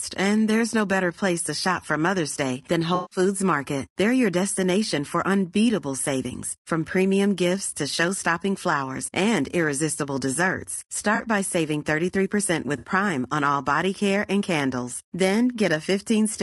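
This speech recording carries plainly audible coding damage from start to finish, most likely low-delay AAC compression of the AAC-ELD kind used in video calls, at a rate consistent with roughly 32 kbps. The short analysis frames give poor resolution of the voice's harmonics, so the speech sounds rough and grainy, with noise filling the gaps between harmonics and a thin, somewhat synthetic upper band. On top of this there are three spots of AAC frame loss with concealment, where the decoder patches missing audio from the last good spectrum. The longest runs from 2.95 to 3.19 s and covers about 160 ms of missing sound, heard as a smeared, noisy or phasey stretch. Two shorter ones follow, 11.15 to 11.21 s with about 40 ms missing and 12.77 to 12.87 s with about 60 ms missing. Both come across as brief smeared, noisy or phasey blurs rather than gaps.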